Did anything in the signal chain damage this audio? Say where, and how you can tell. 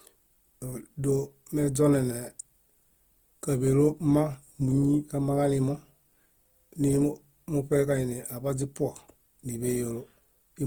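Yes, at the codec stage, throughout the speech: the high end extends to about 20.2 kHz, yet voiced sound is rough, grainy and noisy. This points to Opus compression, likely at a low rate around 24 kbps, with band energies kept but detail filled by folding and noise.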